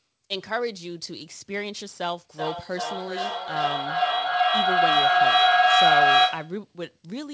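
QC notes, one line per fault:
2.31–6.67 s, feedback howl: a tone near 700 Hz swells rather than decays, pulsing roughly every 0.4 s and peaking about 11 dB above the speech. Sound loops between two nearby call devices, gaining on each trip. Echo repeats would fade.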